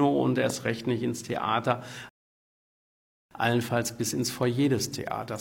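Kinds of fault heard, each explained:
Loud pop: At 0.50 s a single sharp pop sits on top of the sound, peaking around 10 dB above it and over within a couple of hundredths of a second, while the sound runs on beneath it without a break. It is likely a brief voltage pulse, such as a static discharge or a switching or driver glitch, entering the signal path. Unlike a dropout or a click from a splice, nothing is removed. The pulse is simply added.
Rebuffering stall: From 2.09 s to 3.31 s the audio falls silent, then picks up exactly where it stopped, adding about 1.2 s to the running time. The player ran dry of downloaded audio and waited for more to arrive before continuing. What separates this from a packet-loss dropout is that no material goes missing. The sound pauses and resumes intact, and the delay is the only cost.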